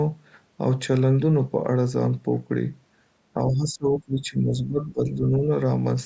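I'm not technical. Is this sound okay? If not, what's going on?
No. From 3.34 to 5.49 seconds the speech sinks noticeably in volume for about a second and a half. This is likely speech suppressed in double talk: both sides spoke at once, and the call's echo control turned this talker down along with the echo.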